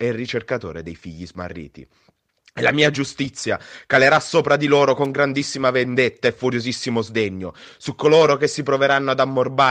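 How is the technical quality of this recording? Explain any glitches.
One glitch stands out in this speech recording. An electrical switching spike occurs at 5.05 s, between "calerà sopra di loro" and "grandissima vendetta e furiosissimo". It is a sharp snap lasting only about 10 ms and peaking around -20 dBFS, sitting on top of the speech. It was likely caused by a nearby switch, motor or static discharge arcing briefly, with the audio line picking up that burst as a click.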